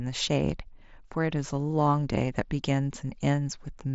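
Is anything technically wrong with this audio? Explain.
No, this is speech over a Bluetooth mSBC headset link working as designed, with the band stopping near 7.7 kHz and only the light grain that codec normally leaves.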